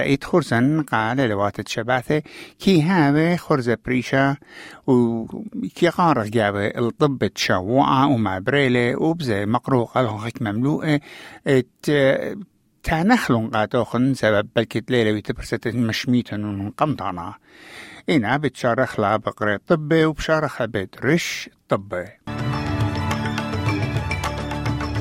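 No technical faults are audible anywhere in the audio.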